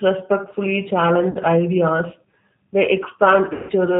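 Speech that sounds narrow, slightly rough and synthetic throughout, with nothing above 4 kHz: G.729 codec damage, a pulse-coded vocal model whose sound fits an 8 kbit/s VoIP stream. At 1.31–1.38 s the sound smears into a brief buzzy tone or coloured noise that fades, and at 3.53–3.71 s a longer stretch does the same before recovering weakly. This is VoIP packet loss concealed by the speech codec: the decoder extended its last pitch and filter over about 40 ms and 160 ms of missing audio.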